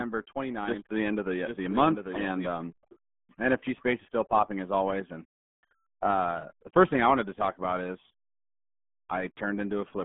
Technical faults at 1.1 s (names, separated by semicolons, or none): RealAudio 14.4 codec; doubled audio track